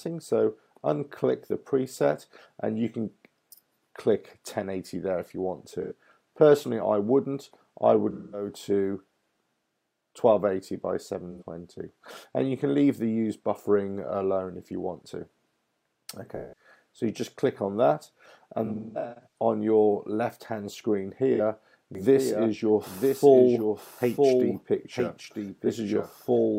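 AAC frame loss with concealment occurs at 5.82, 8.12, 11.31, 16.36, 18.65 and 21.34 s. The gaps run from 43 to 213 ms, and at 18.65 s about 430 ms of losses are scattered over 0.6 s. The decoder rebuilds each gap from the last good spectrum, so these patches sound smeared, noisy or phasey.

A doubled audio track starts abruptly at 21.95 s and runs to the end. A full-band copy trails about one second behind, some 5 dB quieter, with no reverberant tail, likely from a second, slower capture path mixing the same sound back in.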